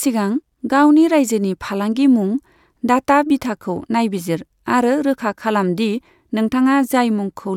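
No technical faults can be heard anywhere in the speech recording, and the signal stays steady and intact throughout.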